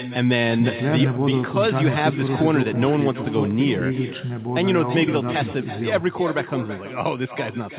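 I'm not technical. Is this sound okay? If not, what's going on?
No. Throughout, every phrase repeats about a third of a second later, quieter and thinner: echo with no canceller, where the far loudspeaker leaks into its microphone.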